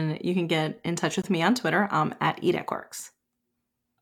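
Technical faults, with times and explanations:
1.22 s, gap at a join of encoded pieces: the speech was encoded in separate pieces, apparently about 4 s each, and joined without trimming, so the encoder's start-up delay and the padding of the final frame both stayed in. The result is a silence of about 18 ms cut into the continuous speech, with edges smeared by the codec. The speech then resumes exactly where it stopped.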